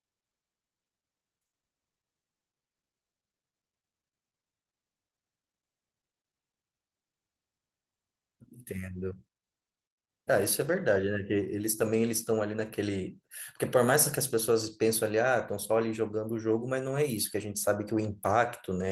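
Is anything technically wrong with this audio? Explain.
No, nothing is technically wrong.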